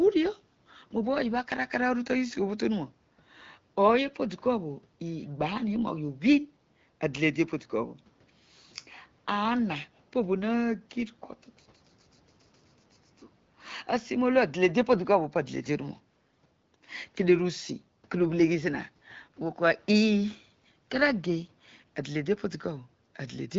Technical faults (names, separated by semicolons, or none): none